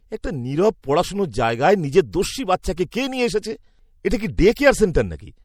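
Throughout the speech there is plainly audible MP3 compression damage, most likely from an encoder starved of bits, at a level that fits a bitrate around 64 kbps. With too few bits to go round, weak frequency lines are dropped in some frames and kept in others. The result is a watery, swirling texture with metallic chirps on s sounds. Unlike broadband noise, this damage tracks the signal and vanishes in silence.

Pre-echo appears at 2.11 s, 2.76 s and 2.91 s, each about 16 to 19 ms long, and again from 4.53 to 4.57 s, spreading about 32 ms. In each case a sharp onset landed late in a transform block. The quantisation noise meant for the loud attack spilled backward into the quiet just before it, giving a brief hiss ahead of the attack and a softened edge. A click or dropout is different: it sits on or after the event, never leading it.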